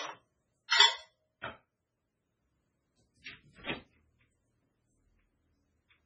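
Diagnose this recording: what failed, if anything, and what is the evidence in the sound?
Treble stops dead at 7.5 kHz throughout, with heavy watery swirl. That points to likely MP3 compression at a very low bitrate, around 16 kbps. A fixed ceiling plus swirl separates this from simple low-pass filtering.

Pre-echo in the codec stage: short hiss precedes attacks at 0.68–0.72 s, 1.41–1.44 s and 3.23–3.26 s. Block-spread quantisation noise lands before each transient, unlike reverb, which trails it.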